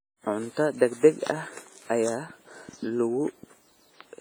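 From start to finish, the speech carries heavy damage from lossy coding. It is likely WMA compression. The sound rings and smears. Quantisation noise spreads over tens of milliseconds around each sound, so onsets blur. A hiss rises and falls with the speech. Quieter spectral detail drops out, leaving a hollow, washy tone. The level of damage fits a low bitrate of about 24 kbps. The long transform blocks are too coarse at that rate.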